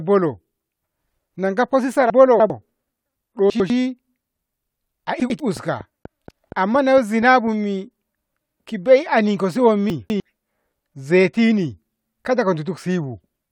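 At 2.1 to 2.5 s the speech jumps as chunks play out of order: a 100 ms block arrives three blocks late and lands after its successors, leaving hard joins that scramble the syllables. Shorter swaps follow at 3.5 to 3.7 s and 5.2 to 5.4 s, each one block late.

From 5.57 to 7.48 s a train of clicks ticks at a steady 4.2 per second, about ten pulses at roughly speech level, also audible in pauses, likely interference or a faulty connection.

At 9.9 to 10.2 s another 100 ms chunk plays two blocks late.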